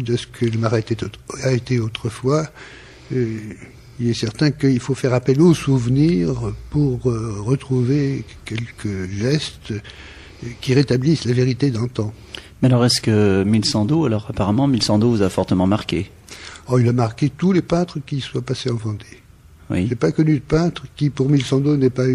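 Throughout the audio there is plainly audible damage from MP3 compression. Weak frequency lines flicker in and out between frames, giving a watery, swirling texture, while attacks smear, which likely points to about 64 kbps. Unlike plain low-pass filtering, the damage keeps shifting over time.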